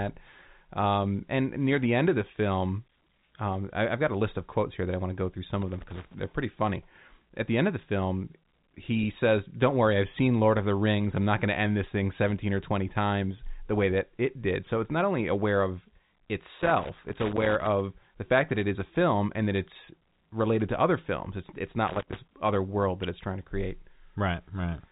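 Loose connector crackle at 5.62–6.14 s (after "to go through some"), 16.62–17.67 s and 21.88–22.19 s: a worn contact intermittently breaks the speech path, giving irregular bursts of scratchy crackle through the telephone-band speech.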